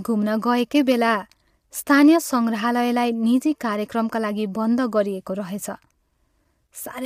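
Throughout, the speech sounds rough and grainy, with nothing above 15.7 kHz, most likely from low-delay AAC compression, which fits AAC-ELD at around 32 kbps.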